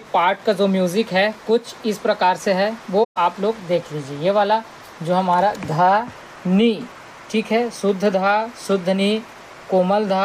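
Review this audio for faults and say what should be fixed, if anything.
A soft-edged hole from 3.03 to 3.17 s fades out and back in. This is AAC frame loss with muting: 128 ms of frames zeroed, with overlapping windows smoothing the edges. Protect the stream with retransmission or forward error correction so lost AAC frames are recovered rather than muted.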